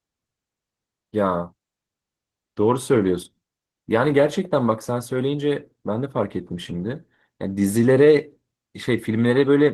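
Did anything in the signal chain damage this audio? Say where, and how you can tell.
Yes. Opus voice compression at the codec stage affects the whole clip. The speech sounds muffled, hoarse and faintly robotic, which points to a rate around 16 kbps: the linear-prediction coder quantises the excitation coarsely, and a CELT layer carries the band above 8 kHz.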